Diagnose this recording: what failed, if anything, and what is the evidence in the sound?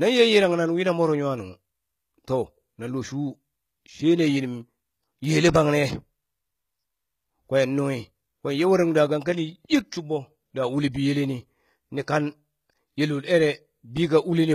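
Codec stage, likely HE-AAC compression around 20 kbps. The speech's treble throughout sounds copied up from lower bands: bright but gritty, with lispy s sounds.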